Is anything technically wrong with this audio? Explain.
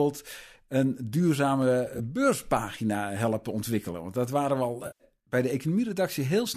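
Yes. There are three faults of two kinds.

Dropped samples at 1.62 s, just before "beurspagina helpen": a tiny fraction of a millisecond of the stream is missing, so the waveform jumps straight from one value to a later one. Far too little is lost to remove any sound. The sharp single click and thin vertical line across the spectrum point to this as the likely cause.

AAC frame loss with concealment from 1.86 to 2.00 s, also before "beurspagina helpen", and from 4.87 to 5.04 s, between "dat waren we al" and "bij de". When coded frames go missing, the decoder rebuilds the gaps from the last good spectrum, with randomised phase or interpolated energy. In the first event, about 50 ms is lost in short gaps of roughly 10 ms each, spread over 140 ms, which fits several separate lost frames. It sounds like a brief smeared, phasey flutter. The second event loses 130 ms of frames within about 170 ms. 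The concealment holds on longer there, so the sound turns noisy and smeared before normal audio returns.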